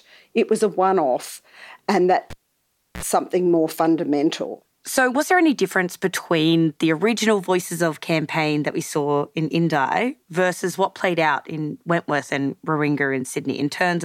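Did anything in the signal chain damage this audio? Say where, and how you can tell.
Yes. At 2.30 s, right after "a one off and", a pop cuts the speech to near silence for about 0.67 s, then a 49 ms burst of 60 Hz buzz and a second pop bring it back by 3.03 s, before "something more fundamental". That's a cable pulled and plugged in on the analogue wiring, with only the tip briefly touching.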